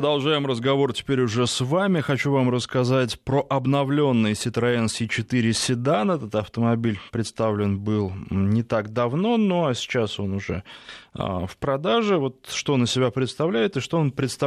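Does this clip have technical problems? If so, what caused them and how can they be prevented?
No, there are no technical faults in this speech clip. Since nothing went wrong, there is nothing to prevent.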